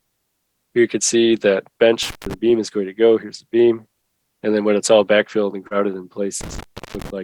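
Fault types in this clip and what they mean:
intermittent contact: A loose cable or plug briefly breaks the connection, twice here: from 2.03 to 2.34 s with the line open for 160 ms, and from 6.41 to 7.10 s with it open for 363 ms. Crackle marks each edge, unlike a clean digital dropout.
short concealed packet loss: At 5.67 to 5.73 s, 40 ms of audio never arrived and the receiver filled 31 ms by extending the preceding sound before blending back. It is heard as a short smear rather than a crackly gap with hiss.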